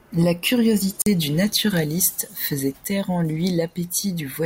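The wireless link most likely failed to deliver a few audio packets to the headphones in time, a Bluetooth dropout. The receiver had nothing to play, so the output went silent. In this speech, from 1.02 to 1.07 s, the sound cuts out for about 44 ms, a gap that fits roughly three lost packets. The speech then resumes further along, as though it had kept playing through the hole, leaving a brief skip rather than a pause.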